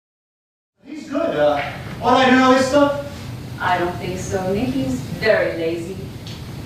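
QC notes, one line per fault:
No faults found; the level fades in smoothly from around half a second, reaching full level by 1.79 s, with no click or hard edge.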